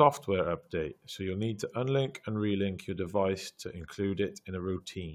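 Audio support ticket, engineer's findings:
No faults found in this speech clip; nothing to report for the ticket.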